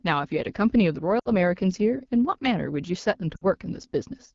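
Throughout, the speech sounds rough and raspy. This is AMR wideband (HD Voice) codec damage at a low rate, consistent with 8.85 kbit/s. At 1.19 to 1.30 s and again at 3.35 to 3.45 s, the speech smears, fades briefly and returns rough. These are lost AMR speech frames, consistent with three dropped 20 ms frames each time, concealed by repeating decaying parameters.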